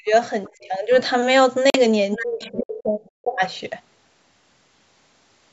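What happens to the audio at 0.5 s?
Faint traces of a second voice, the other side's voice leaking through, sit under the talker from 0.45 to 0.63 s. They are very low, far beneath the main speech. The likely cause is loudspeaker playback reaching the microphone and not being fully removed by the echo canceller.

At the same moment the talker's own speech is suppressed in double talk, from 0.48 to 0.92 s. The voice dips by about 15 dB at its deepest. It likely happens because both sides spoke at once, and the echo canceller turned down everything it could not separate.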